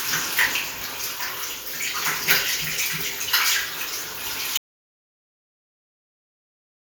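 At 4.57 s the sound cuts off into silence, with no room tone, through to the end: an audio dropout to silence, likely from a lost input while recording continued.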